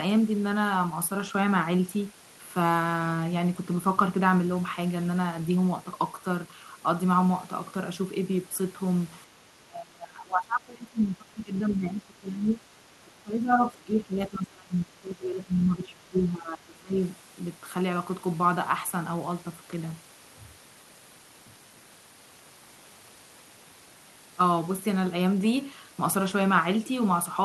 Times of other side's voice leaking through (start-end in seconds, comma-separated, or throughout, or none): 13.61-13.65